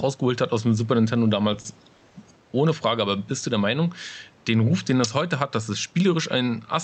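Gain pumping runs through this whole speech clip. The gain swings by around 10 dB, likely from a fast limiter fighting a gain set far too high. Repeated stalls (stutter) occur between 1.53 and 2.13 s. Late packets emptied the jitter buffer four times, and the last sound was stretched to fill about 140 ms, with the longest hold at 50 ms. Nothing is lost, but the speech drags and hiccups.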